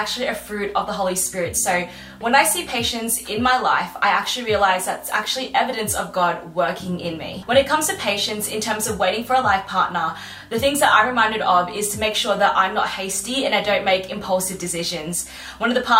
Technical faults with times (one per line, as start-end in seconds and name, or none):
none